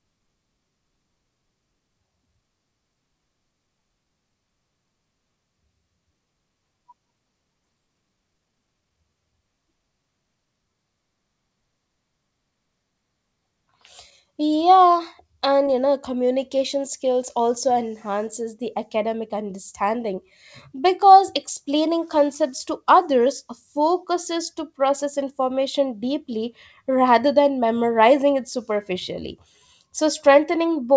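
At 7.64 s the speech jumps abruptly forward, losing about 0.4 s with no gap filled. This skip ahead happens when the receiver drops a stretch of audio because later packets are already waiting. From 7.74 to 8.97 s the speech sounds hurried but keeps its pitch, running at 112% speed. This jitter buffer speed-up comes from the buffer trimming short pitch-period slices, roughly 0.15 s in total, to shrink excess delay. Both faults sit on a G.722 call path whose band stops at 8 kHz.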